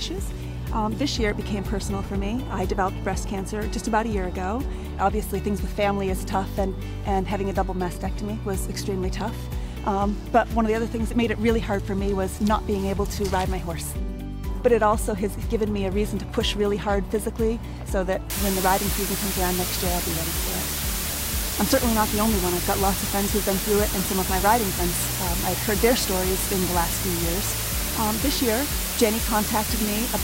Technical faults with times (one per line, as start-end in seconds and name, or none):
18.30-30.23 low bit depth with dither